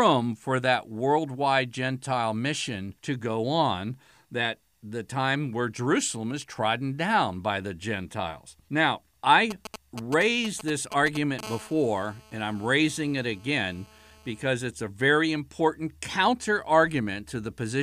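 From 9.51 s to 11.41 s a galloping dit-dit-dit of short raspy buzzes cuts in, fairly loud against the speech. These are GSM signalling bursts: a nearby 2G phone is sending brief groups of radio bursts at about 217 Hz, which the audio circuit rectifies.

Straight afterwards, from 11.43 s to 14.44 s, a steady, hard 217 Hz buzz full of harmonics runs under the speech at about 23 dB below it. This is GSM phone buzz, with a phone now in a call and transmitting in bursts 217 times a second, its pulses again rectified into the audio.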